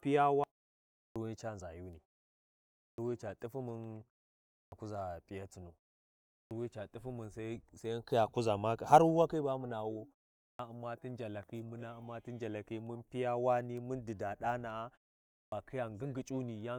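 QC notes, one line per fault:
0.94 to 15.52 s (at 0.94, 2.76, 4.48, 6.28, 10.36 and 15.28 s), clipped start after a pause: during each gap of 0.3 to 0.78 s the output device sleeps and needs time to wake again, so 216 to 242 ms of the next sound is swallowed and speech resumes abruptly, missing its opening sounds.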